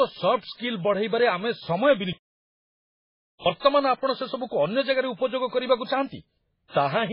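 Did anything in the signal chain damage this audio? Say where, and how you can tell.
Yes. Throughout the speech, nothing is present above 5.3 kHz, and weak detail swirls and flickers from frame to frame with a watery quality and smeared consonant attacks. That is likely heavy MP3 compression at the codec stage, fitting a bitrate near 16 kbps. A plain low-pass filter would remove the treble but leave no shimmering artefacts.

At playback, the audio goes silent from 2.13 s to 3.46 s, a gap of about 1.33 s, and then continues. This is likely a playback stall, where the player ran out of data or its thread was blocked. Network packet loss gives short, repeated gaps, not one long clean stop.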